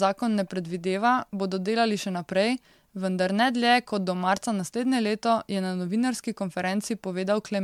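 Speech, and the whole thing has that swirly, hollow, smeared character of generation loss. It's worse than a single lossy pass would give you: consonant attacks are blurred and there's a watery churn in the top end from start to finish. The likely cause is an MP3 encode repeated around four times, at something like 96 kbit/s, with each pass re-quantising on a shifted frame grid so the noise and spectral holes keep piling up.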